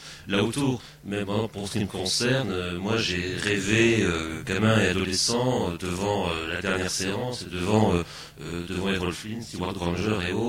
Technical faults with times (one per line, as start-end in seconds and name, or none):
0.00-10.49 channel delay (doubling)